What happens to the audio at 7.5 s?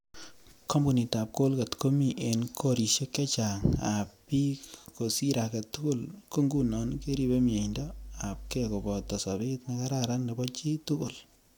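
At 7.5 s you're in the middle of a stretch of mains hum, running from about 6.54 to 9.21 s, right after "tugul ko". A steady 50 Hz drone sits roughly 15 dB under the speech, the power line leaking in through a ground loop or a nearby transformer.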